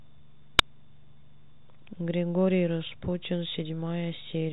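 At 0.59 s there is a single sharp bang. This is invalid numbers at full scale. Some calculation produced infinite or invalid values, and each was forced to the largest positive or negative sample. The output sat pinned at one extreme value for about 5 ms. That block is too short to hear as separate pops with silence between. It lands as one loud click. The telephone-band G.726 ADPCM coding stays clean, with nothing passing above about 3.9 kHz.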